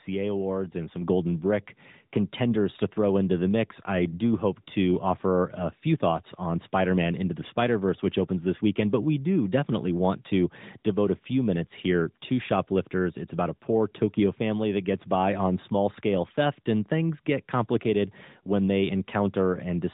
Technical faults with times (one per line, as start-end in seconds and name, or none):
1.02 microphone volume stepped up